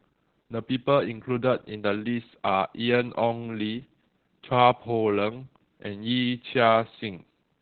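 Muffled, hoarse and faintly robotic speech throughout, with nothing above about 4.5 kHz: heavy Opus voice compression, its SILK coder squeezed to narrowband, which fits roughly 8 kbps.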